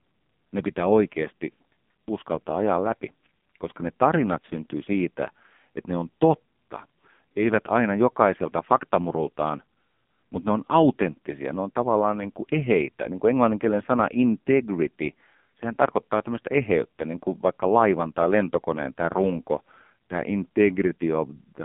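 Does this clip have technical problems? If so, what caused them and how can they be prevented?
Yes. Throughout, the speech carries AMR narrowband mobile codec damage. The codec models the vocal tract and drives it with a few pulses per 5 ms subframe of each 20 ms frame. Here the damage is heavy, giving a buzzy, synthetic tone that fits a low mode near 5.9 kbps. A spectrogram shows energy confined to roughly 150 Hz to 3.6 kHz and nothing above 3.7 kHz. Prevent it by recording locally or using a wideband link instead of a narrowband mobile call.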